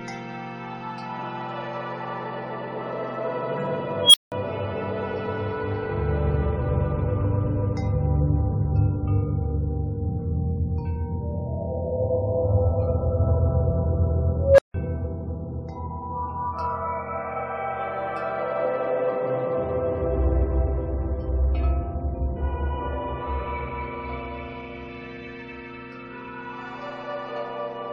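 Unstable filter at 4.02 s and 14.36 s: runaway recursion swells a roughly 3 kHz, then 500 Hz, tone over 115 and 220 ms, clipping before 180 and 160 ms silences.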